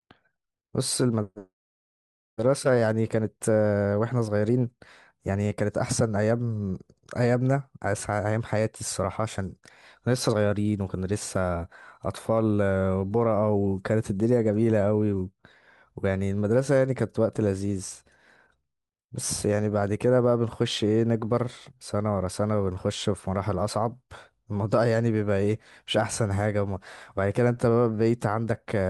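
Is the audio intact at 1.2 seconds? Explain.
Yes, the speech at 1.2 seconds plays through intact, with no audible dropout, click, distortion or other technical fault at that point.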